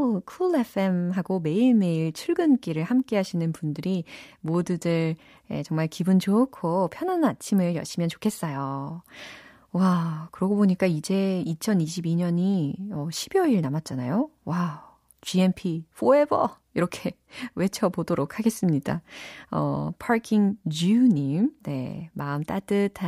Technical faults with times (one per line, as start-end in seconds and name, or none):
none